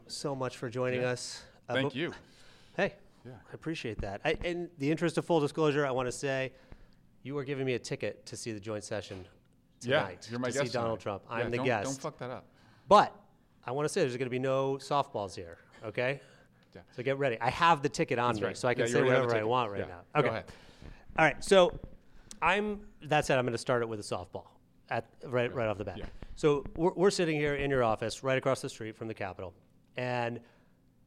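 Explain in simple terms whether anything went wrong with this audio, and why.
Nothing went wrong with this audio, because there are no faults to be heard anywhere in it.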